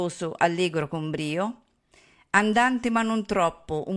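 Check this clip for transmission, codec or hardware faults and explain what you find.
No transmission, codec or hardware fault can be heard anywhere in the speech. There is nothing to place in time or trace to a cause.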